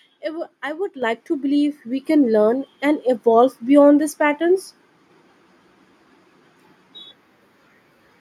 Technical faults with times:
1.02 microphone volume stepped up
2.04 microphone volume stepped up

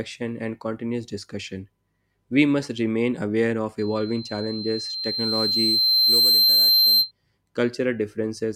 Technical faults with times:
3.78-7.11 loudspeaker feedback squeal

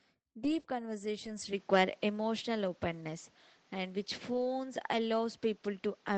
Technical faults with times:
0.43-0.65 lost packet rebuilt from error correction
1.25-1.27 lost packet rebuilt from error correction
1.53-6.18 input switched to a poorer device
4.33-4.43 lost packet rebuilt from error correction

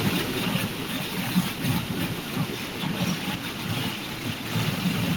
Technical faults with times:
0.05-1.04 automatic gain falling

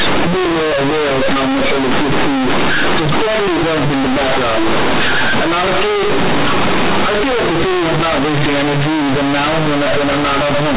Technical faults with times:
0.00-10.76 companded audio read as linear

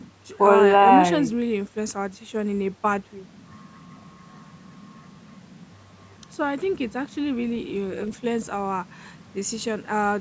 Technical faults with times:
none

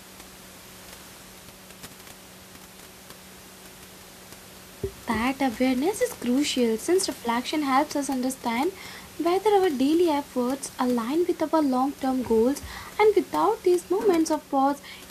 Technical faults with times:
none

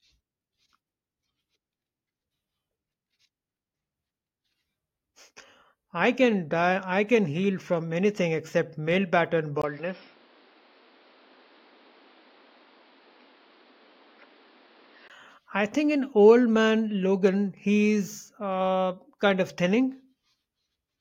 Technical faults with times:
9.62-15.10 input switched to a poorer device

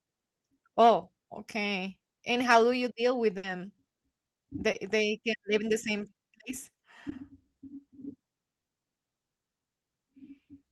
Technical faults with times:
3.37-3.45 burst of packet loss
4.71-4.75 short concealed packet loss
7.09-7.13 short concealed packet loss

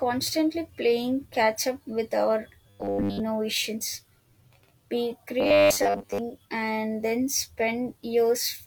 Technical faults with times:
2.70-3.20 robotic sound from repeated short buffers
5.40-6.18 robotic sound from repeated short buffers

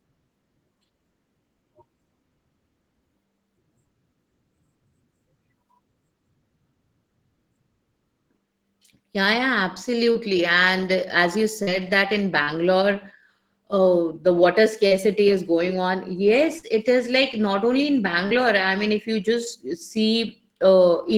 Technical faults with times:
10.11-10.18 short concealed packet loss
11.63-11.70 short concealed packet loss
12.43-12.50 short concealed packet loss
14.87-14.94 short concealed packet loss
16.59-16.66 short concealed packet loss
18.27-18.34 short concealed packet loss

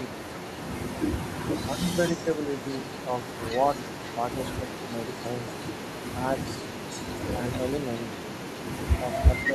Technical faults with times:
0.07-0.25 speech suppressed in double talk
1.65-2.31 speech suppressed in double talk
2.07-9.52 echo leak
2.63-3.39 speech suppressed in double talk
4.60-4.92 speech suppressed in double talk
9.02-9.54 speech suppressed in double talk

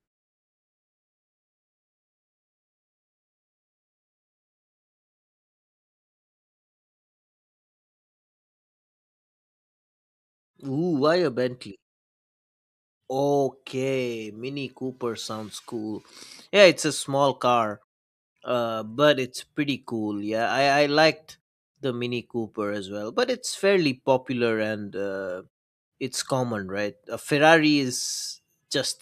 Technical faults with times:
none

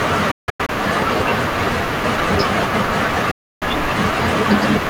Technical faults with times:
0.31-0.69 Bluetooth dropout
3.31-3.62 Bluetooth dropout

